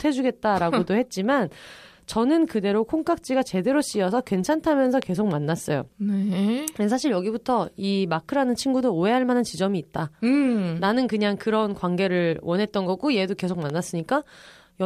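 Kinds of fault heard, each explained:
Loud pop: Single pops of about 20 ms break over the speech at 5.02 s and 13.70 s, peaking roughly 10 dB and then 5 dB above it, with speech continuing beneath. The likely cause is a sudden voltage spike entering the signal.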